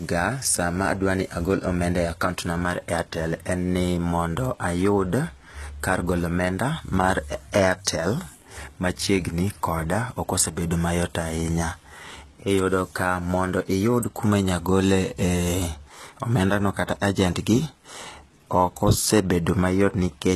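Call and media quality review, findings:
Speech, entire clip. Plainly audible codec damage. Treble synthetic; s sounds gritty, lispy, metallic. Nothing above 12.4 kHz. Likely HE-AAC compression, consistent with roughly 16 kbps. Upper band rebuilt by spectral band replication; harmonics misaligned across crossover.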